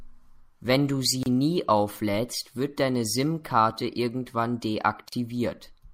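At 1.23 s and again at 5.09 s the speech drops out for about 30 ms and then about 39 ms. These are gaps at a join of encoded pieces: separately encoded segments were spliced untrimmed, so each encoder's start-up delay and final-frame padding left silence in the stream. On a waveform each shows as a flat stretch with abrupt, slightly smeared edges. A spectrogram shows a thin blank vertical band across all frequencies, with the speech resuming where it stopped.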